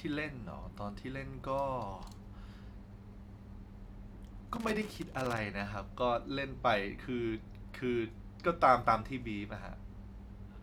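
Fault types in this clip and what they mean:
Loose connector crackle: A worn or dirty contact in the signal path is moving and losing touch for brief moments. Each break chops the speech signal off and on again. Any DC sitting on the line jumps at each break and adds a pop. Here it shows as an irregular burst of scratchy crackle from about 4.55 to 5.38 s. The crackle sits over the speech and has no steady rhythm.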